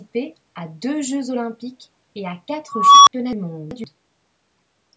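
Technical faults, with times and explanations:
2.68–3.13 s, unstable filter: a tone around 1 kHz swells over 0.38 s into clipping, then drops to 64 ms of silence; the waveform balloons, flattens, then goes blank.
3.33–3.84 s, chunks out of order: a 128 ms chunk plays three chunks late, jumbling the sound; three hard joins appear as vertical spectrogram seams and click-like waveform jumps.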